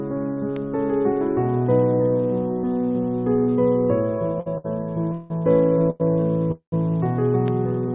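A loud pop at 0.56 s stands a few decibels above the sound, which carries on underneath it. It is a single sharp click, over in about 20 ms. Its likely cause is a voltage spike, from a switch, static or a driver glitch, that was shaped by the circuits after it.

A short stall from a late packet follows at 4.40 to 4.48 s, and another comes at 4.58 to 4.66 s. Each time, a packet arrived after it was due, and the jitter buffer ran dry. The receiver held the last sound for about 58 ms and then about 64 ms, then resumed from the same point. Each is heard as a brief smeared hold with a slight buzz or dip.

A call audio freeze at 5.12 to 5.32 s stretches the sound for about 180 ms into a fading buzz or hiss, and then playback picks up where it left off. This points to packets held up on the network long enough to empty the buffer.

A third late-packet stall at 5.90 to 6.02 s holds the sound for about 97 ms.

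A second freeze at 6.52 to 6.74 s lasts about 200 ms. The concealment fades out, and about 100 ms of that is silence before the audio resumes. Nothing is lost, but a gap has been inserted. All of this sits within the narrowband call path, where nothing above 4 kHz comes through, which fits G.711 mu-law at 64 kbps.

A second loud pop at 7.48 s is stronger, at about 10 dB above the sound. It is again a single click of about 20 ms.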